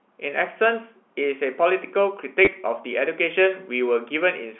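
A speech clip carried over G.711 telephone coding, whose band of roughly 250 Hz to 3.4 kHz shows as a clean ceiling on a spectrogram. At 2.45 to 2.47 s, packet loss with the last packet repeated leaves about 20 ms of replayed audio, a brief robotic stutter that likely covers two lost packets. The waveform shows a short copied segment with abrupt joins.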